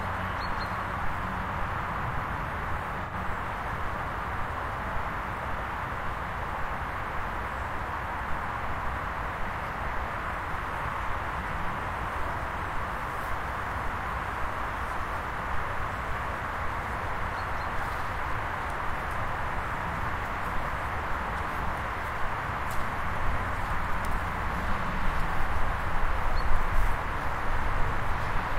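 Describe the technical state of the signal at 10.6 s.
At 10.6 s the signal is intact, with no dropout, clipping, glitch or other technical fault at that moment.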